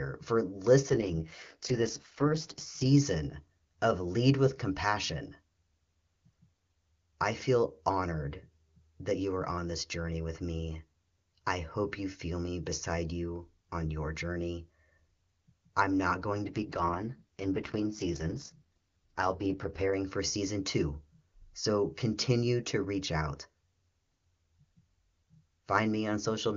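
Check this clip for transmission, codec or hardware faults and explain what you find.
Two AMR rate drops are audible in this speech clip, both on a wideband (HD Voice) AMR-WB call whose normal rate sounds clean.

AMR rate drop, from 0.89 to 2.85 s and from 16.46 to 19.93 s (after "I'm not going", recovering before "for season two so"). The network pushed the codec down to spend more bits on error protection, and the roughness fits a fall from 23.85 to 6.6 kbit/s. The voice turns raspy and synthetic with no gap and no loss of band. On a spectrogram the 7 kHz upper edge stays put, but harmonics blur into noisy, smeared energy. The waveform remains continuous.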